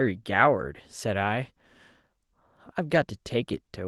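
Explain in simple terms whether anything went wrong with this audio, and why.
One small hiccup, right around 2.93 to 2.95 s. That's a lost packet rebuilt from error correction. A single chunk of the speech, about 20 ms, went missing on its way through the call. The packet right after it carried a cheaper backup copy, so the receiver played that instead. You don't get a silent gap, just a brief patch that sounds a bit rougher and noisier than the speech around it.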